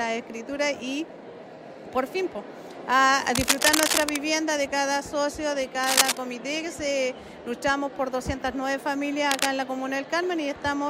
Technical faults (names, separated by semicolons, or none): cable scratch noise